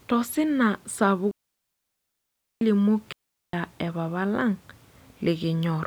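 Speech with two digital wireless dropouts, where the receiver lost too much data and muted the output. The first runs from 1.31 to 2.61 s, a full 1.3 s hole; the second from 3.13 to 3.53 s, about 0.41 s, ending just before "e papa". Each is near silence with a very quick fade and no noise burst at either edge. A waveform shows flat gaps with abrupt borders, and a spectrogram shows clean, empty vertical bands.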